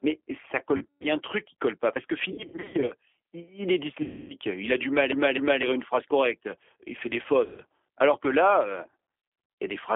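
Throughout, the speech carries G.729 codec damage: a telephone band of about 300 Hz to 3.4 kHz and a rough, slightly synthetic texture at 8 kbit/s. Unlike simple band-limiting, the voice itself sounds rebuilt from a filter and pulses, not merely muffled.

VoIP packet loss concealed by the speech codec breaks in at 0.77–1.08 s, 2.32–2.93 s (before "il est"), 4.02–4.34 s (between "il est" and "il a du mal"), 7.46–7.61 s and 9.22–9.58 s (after "que là euh"). The decoder stretches its last pitch into a fading buzz rather than leaving clicks or silence, and the speech stays weak briefly afterwards.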